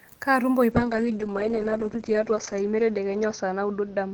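From 0.72 s to the end, a call bitrate drop cuts encoding from 32 to 8 kbps. Bandwidth falls from 20 kHz to 8 kHz, so speech sounds muffled and rough.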